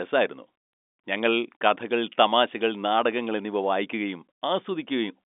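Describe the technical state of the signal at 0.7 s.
At 0.7 s the audio is intact, carrying the narrow telephone band of G.711 telephone coding, with nothing above about 3.8 kHz.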